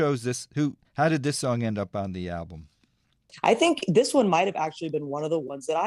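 At 5.48 to 5.51 s, AAC frame loss with concealment. About 20 ms of audio went missing; the decoder patched the gap from the previous spectrum, leaving a brief smeared, noisy blip.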